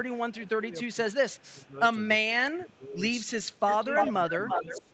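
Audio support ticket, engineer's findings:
Speech dips and breaks up at 0.34–1.76 s, 2.27–3.02 s, 3.78–3.94 s and 4.29–4.93 s, by up to about 20 dB. Likely speech suppressed in double talk: the canceller ducks near-end speech during overlap.

Delayed copy of the speech at 1.12–1.48 s (faint, about 390 ms late) and from 3.56 s to the end (near full level, about 340 ms late). Likely echo leak: loudspeaker pickup not cancelled and sent back.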